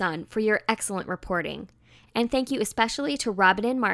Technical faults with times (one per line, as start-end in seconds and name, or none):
none